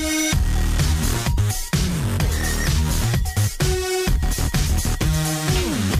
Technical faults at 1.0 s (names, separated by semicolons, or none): none